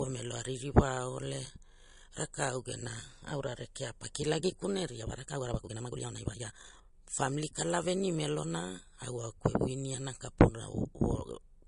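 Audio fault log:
throughout: low-bitrate audio saved at a high bitrate. The speech was likely encoded as low-rate MP3, around 40 kbit/s by the sound of it, then re-saved at a much higher rate. The coding artefacts remain because re-encoding cannot restore removed detail.
4.97–6.95 s: time-stretched section. This stretch was squeezed to about 1.81 times normal speed, likely by software that drops short pieces to keep the pitch. The speech suddenly rushes while its pitch stays unchanged.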